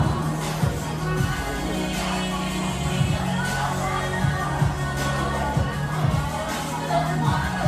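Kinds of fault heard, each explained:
Generation loss: the sound is swirly, smeared and hollow throughout, attacks blur, and nothing sits above 14 kHz. This likely stems from around five repeated lossy encodes, fitting AAC-LC near 64 kbit/s, each requantising on a shifted frame grid.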